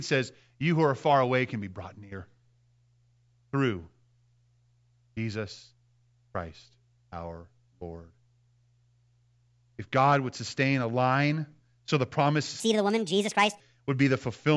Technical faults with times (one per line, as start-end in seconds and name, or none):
12.60-13.60 wrong sample rate